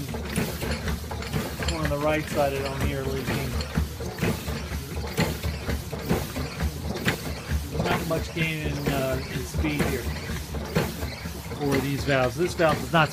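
At 5.95 s and again at 7.92 s there is a sudden jump in the sound, each skipping roughly 40 ms with no gap of silence, unlike a dropout. That points to a likely dropped buffer (overrun), where samples were overwritten before being read.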